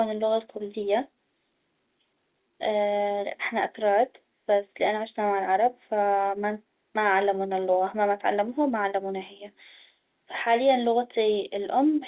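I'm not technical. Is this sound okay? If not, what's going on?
Yes, this sound is okay: it's ordinary telephone-line audio with nothing going wrong in it.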